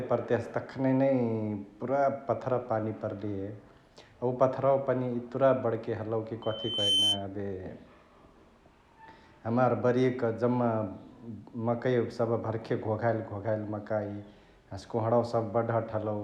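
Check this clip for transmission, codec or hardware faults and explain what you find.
One fault is present, a burst of loudspeaker feedback squeal. From 6.42 to 7.25 s a single piercing tone near 3.1 kHz swells over about half a second until it sits a few decibels above the speech. A microphone was picking up its own loudspeaker, and at that frequency the loop gain exceeded one, so the tone fed itself and grew.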